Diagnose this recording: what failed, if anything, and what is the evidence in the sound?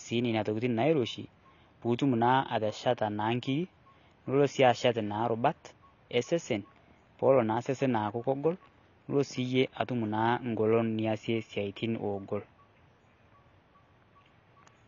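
Codec stage: the speech sounds dull and smeared throughout, with a flat spectrogram ceiling at 6.9 kHz. Likely AAC compression discarding high-frequency detail at a low bitrate, around 24 kbps.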